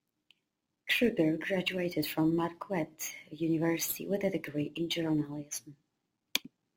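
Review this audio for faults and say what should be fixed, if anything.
Crude rate conversion runs throughout the speech. The rate was changed by simply keeping the nearest existing sample, dropping or repeating samples with no interpolation filter. The timing error this leaves repeats in a fixed cycle, which fits a 48 kHz to 44.1 kHz conversion, and it sits roughly 20 dB below the speech. It is heard as a gritty, inharmonic fizz riding on louder and brighter syllables. To prevent it, resample with a proper band-limited, anti-aliasing resampler instead of picking nearest samples.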